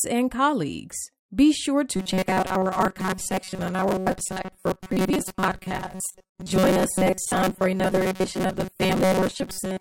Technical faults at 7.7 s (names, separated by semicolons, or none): robotic sound from repeated short buffers